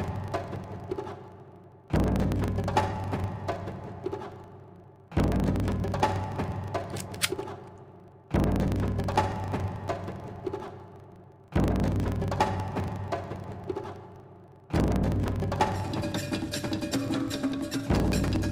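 A filter restarted on every block runs through the whole clip, putting a 25 Hz buzz over the audio. The filter apparently discards its memory at each block boundary, so every 40 ms block starts from silence with a small transient, and the buzz rises and falls with the sound's level.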